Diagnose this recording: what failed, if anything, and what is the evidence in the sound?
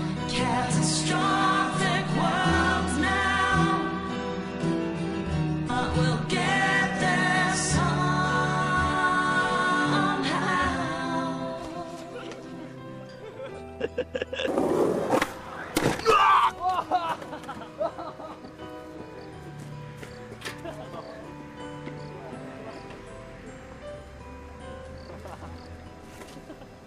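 The codec stage failed: damaged data in a compressed stream produces a brief disruption from 5.66 to 5.70 s. Corrupted bytes in those frames made the decoder misread them and lose sync, so its output was disrupted for about 40 ms before it locked onto the next valid frame header.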